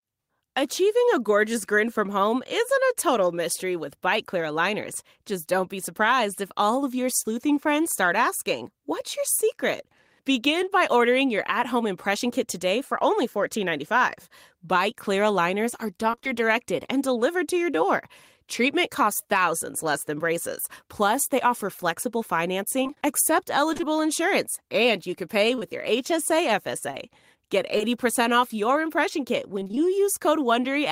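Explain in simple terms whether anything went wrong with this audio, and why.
Yes, a few spots sound broken up. From 16.11 to 16.27 s, between "clear aligners are" and "directed and delivered to", and again from 22.83 to 23.84 s just before "insurance and you can", and from 29.59 to 29.86 s, the speech turns choppy and robotic. This is repeated packet loss: small chunks of audio, up to about 26 ms each, kept going missing in transit. Each hole was patched by stretching the previous sound, and in the first and last stretches those patches make up roughly half the audio.

Just after "and you can pay", at 25.55 to 25.59 s and 25.59 to 25.63 s, there is a quick smear or wobble. This is short concealed packet loss: two 20 ms pieces arrived too late, and the receiver filled each gap by extending the sound that came before.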